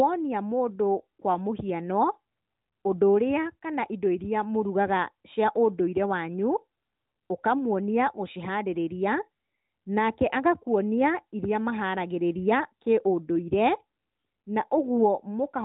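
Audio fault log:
No faults are present in this speech. The AMR narrowband mobile codec path gives it a phone-band sound with nothing above 4 kHz and only light coding colour, which fits its 12.2 kbps mode.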